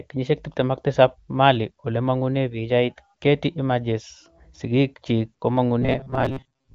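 From 5.82 s to 6.74 s the speech turns into robotic sound from repeated short buffers. It becomes a rigid, metallic buzz near 134 Hz that only loosely tracks the speech. The likely cause is audio arriving too seldom, so the software repeats a short slice to fill the gaps. A 134 Hz buzz fits slices of about 7.5 ms. Roughly half the sound is repeats, with real audio skipped. The wideband codec, with its band limit near 7 kHz, works normally underneath.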